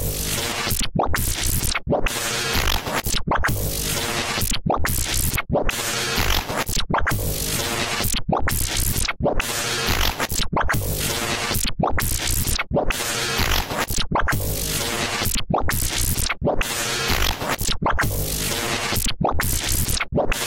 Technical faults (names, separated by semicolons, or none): dropped buffer (overrun)